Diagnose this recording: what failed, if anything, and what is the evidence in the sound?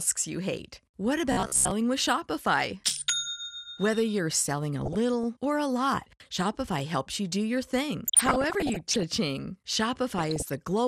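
Throughout, the speech sounds dull, gurgling and granular, with plainly audible codec damage. The likely cause is MP2 compression at a rate that fits about 80 kbps, starving and switching off upper sub-bands.

From 1.32 to 1.71 s the speech turns into a rigid metallic buzz near 67 Hz. This is robotic sound from repeated short buffers at the driver or buffer stage, likely a 15 ms block replayed while most new audio is skipped.

Burbling appears at 4.85 to 5.24 s after "you're selling a", at 8.07 to 9.03 s after "you do your thing", and at 10.18 to 10.62 s. This is DAB burbling: reception bit errors corrupt sub-band levels in the MP2 frames.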